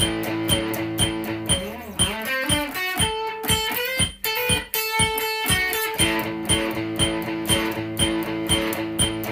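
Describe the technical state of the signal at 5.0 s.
At 5.0 s the signal is intact, with no audible fault at that moment.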